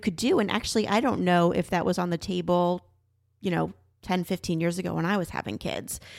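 No technical faults are audible anywhere in the recording.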